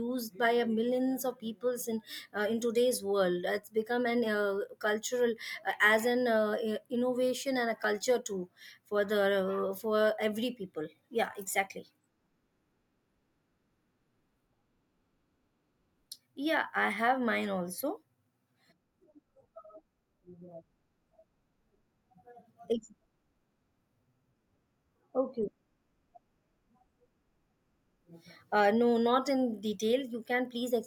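At 7.84 s, just before "too for", the speech skips. It skips again at 17.83 s, right after "I have mine". Each gap is about ten milliseconds, joined with no silence. This is audio missing between chunks, likely from a recorder dropping samples at 10-second chunk boundaries.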